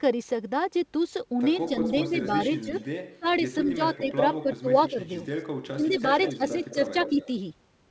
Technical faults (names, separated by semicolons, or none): echo leak; speech suppressed in double talk